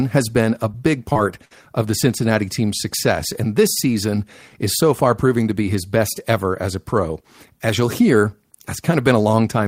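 At 0.71 to 0.75 s and again at 1.13 to 1.17 s there is short concealed packet loss. About 20 ms of speech failed to arrive, and the receiver extended the preceding sound to cover it. Each one is heard as a brief smear. On a spectrogram it looks like a thin, slightly blurred vertical band where harmonics stretch unnaturally.

From 1.45 to 1.52 s a burst of packet loss removes about 60 ms of speech. The decoder stretched the last sound across the gap and let it fade, then resumed further into the speech. On the waveform the amplitude decays before the signal returns. The spectrogram shows frozen, dimming bands.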